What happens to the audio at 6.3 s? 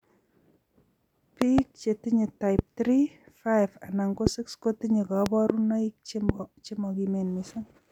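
A loud pop hits from 6.29 to 6.32 s, likely from a sudden voltage pulse such as a plug, switch or static discharge, heard as a single sharp click roughly 20 dB above the speech, which continues underneath.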